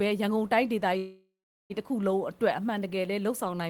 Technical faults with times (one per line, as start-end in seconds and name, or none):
0.97-1.72 call audio freeze